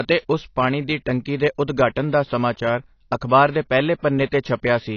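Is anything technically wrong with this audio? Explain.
Yes. The speech carries AAC compression damage from start to finish. Nothing is present above about 6.6 kHz, so the sound is dull and lacks air. The damage is plainly audible. Sibilants turn fizzy, and held sounds take on a warble. The likely cause is low-bitrate AAC-LC encoding. The encoder quantises each frame's spectrum coarsely, drops the top band and leaves gaps that smear the detail. This fits a rate near 24 kbps.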